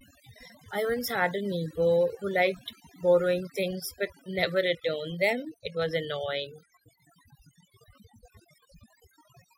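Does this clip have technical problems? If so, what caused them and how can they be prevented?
Yes. The speech is marked by overdone noise removal from start to finish. A noise reduction stage was pushed too hard. Each frequency band that sat close to its noise estimate was pulled far down or shut off entirely. Softer parts of the voice were caught in that and removed too. That leaves a background of near silence scattered with twinkling specks. Set the reduction more gently and let some noise remain.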